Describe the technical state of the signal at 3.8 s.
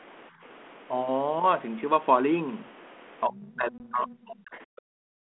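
At 3.8 s the speech sits inside a stretch of speech suppressed in double talk, running from 3.25 to 4.21 s. The level dips by up to about 30 dB and thins out in pieces, likely because the echo canceller could not separate this side's talk from the loudspeaker echo and turned down both.

Within that span, packet loss on an ADPCM call cuts a 20 ms hard-edged gap from 3.78 to 3.81 s, which fits one lost packet. The decoder's predictor and step size then lag the sender's, so the speech returns slightly distorted before settling.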